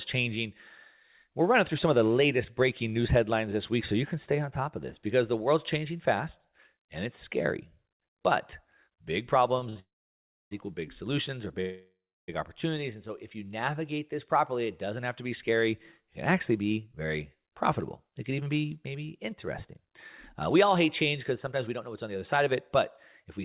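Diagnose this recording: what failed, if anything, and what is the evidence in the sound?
The network and jitter buffer in this narrowband call path are at fault. Two short stalls from a late packet sit at 9.59–9.63 s and 9.69–9.78 s, just before "equal big solutions or". The receiver stretched the last sound by 24 ms and then 64 ms while it waited, so you hear a brief smeared hold with nothing lost.

Right after that comes a proper call audio freeze, from 9.80 to 10.53 s. It's a 0.71 s hole, most of it (about 0.65 s) dead silence after the concealment fades out. A second one runs from 11.61 to 12.30 s, adding 0.67 s with about 0.3 s silent. Packets likely got held up in transit, and the speech resumes where it stopped.

Then there's a jitter buffer speed-up. After "doesn't have to be", from 15.52 s to 23.40 s, the speech runs about 6% fast at unchanged pitch. The buffer is trimming tiny pitch-period slices to shed the delay piled up earlier, roughly half a second's worth in total.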